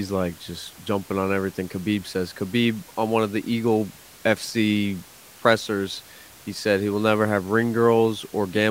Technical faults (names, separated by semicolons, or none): none